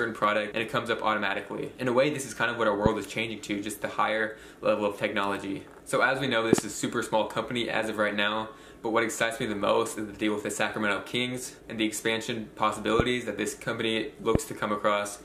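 Loud pops land at 2.86, 6.53 to 6.60 (a double pop), 13.00 and 14.35 s, standing well above the sound, which continues underneath rather than dropping out, likely from voltage spikes such as a plug, switch or static.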